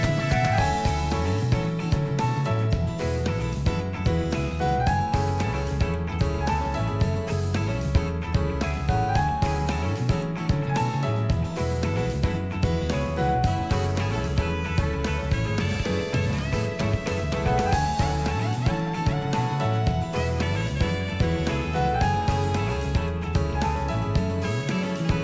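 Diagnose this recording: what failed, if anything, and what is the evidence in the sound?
Nothing failed in this recording, and the sound gives no evidence of any fault at any stage.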